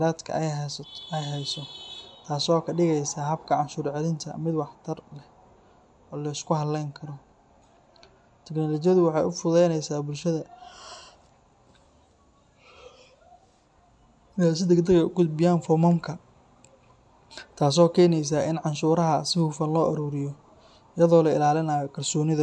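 Nothing in this speech recording calls for comment, since no technical faults turn up anywhere along the way.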